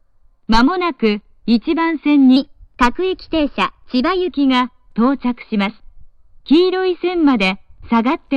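From 2.36 to 4.28 s, a section at the wrong speed plays back about 1.12 times too fast. Speed and pitch rise together, as they do when audio is simply run faster. The sound jumps up by roughly two semitones and feels hurried. The likely cause is that this stretch was played or edited against the wrong clock rate. At 4.28 s the original speed and pitch return abruptly.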